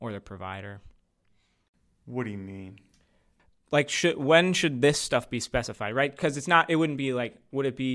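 No technical faults can be heard anywhere in the recording.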